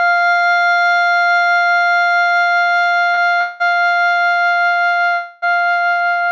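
At 3.14 to 3.29 s the music hangs on one sound for about 34 ms with a slight buzz or dip, a short stall from a late packet: the jitter buffer emptied, and the last sound was stretched until the packet arrived.

From 3.40 to 3.62 s, and again from 5.14 to 5.44 s, the music freezes into a fading buzz or hiss lasting about 196 ms and then 282 ms before picking up where it stopped. This is a call audio freeze, likely caused by packets held up in transit that left the buffer empty. Throughout, the G.722 call path leaves nothing above 8 kHz.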